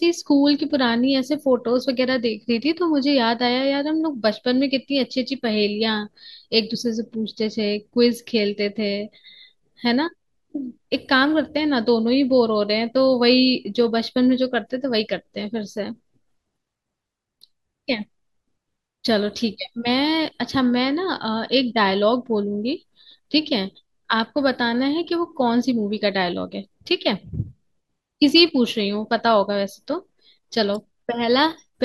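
Speech clip with compressed frames skipped at 6.74 s, 20.24 s and 25.71 s. Each time the audio jumps ahead by about 20 ms, which fits a single missing 21.3 ms frame.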